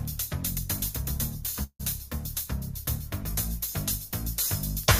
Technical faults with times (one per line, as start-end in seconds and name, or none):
1.63-1.81 call audio freeze